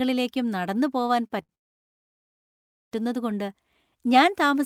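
At 1.27 s and again at 1.42 s, short stalls from late packets hold the speech for 28 ms and then 65 ms. The jitter buffer ran empty, so the last sound stretches before resuming.

A call audio freeze follows from 1.55 to 2.95 s. Sound stops for about 1.4 s, nearly all of it silence. Packets were likely held up in transit. The speech then continues from where it stopped.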